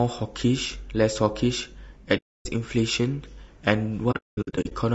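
Throughout, the speech sounds rough and grainy, with noise between the harmonics. The likely cause is low-delay AAC compression, consistent with AAC-ELD at about 32 kbps.

From 2.17 to 2.46 s, AAC frame loss with muting leaves a soft-edged silent hole. The decoder zeroed the lost frames, so the sound fades out and back in. From 4.11 to 4.73 s, the same happens in scattered gaps, the longest about a fifth of a second.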